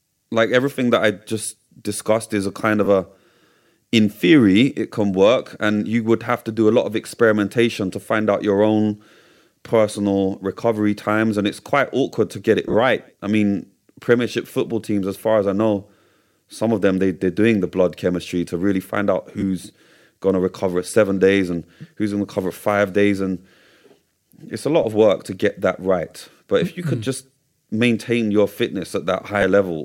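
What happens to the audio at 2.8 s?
Right after "discussed is a kind", at 2.85 s, the speech briefly turns into a rough, noisy smear. These are lost LE Audio frames: about 15 ms of Bluetooth audio went missing, which fits two dropped frames. The LC3 decoder filled the gap by repeating the last spectrum with scrambled signs.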